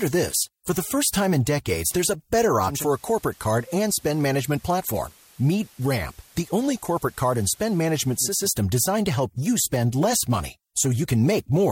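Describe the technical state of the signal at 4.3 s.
At 4.3 s the signal is on the analogue FM path: digital radio blending to analogue runs from 2.60 s to 8.51 s. The receiver lost the digital stream and cross-faded over about 318 ms to the FM broadcast of the same station, returning at the end of the span. On FM the level sits about 1 dB lower, and a steady hiss rides roughly 30 dB under the speech.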